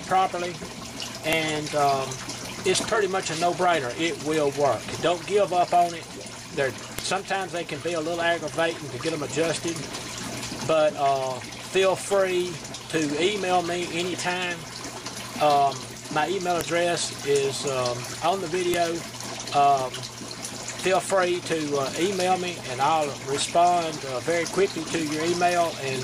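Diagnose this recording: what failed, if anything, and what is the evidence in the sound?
File header played as audio, a storage/joining fault: sharp clicks at 1.33, 6.99, 16.61 and 18.74 s, where unstripped WAV header bytes play as samples, loud regardless of surrounding signal, unlike buffer dropouts.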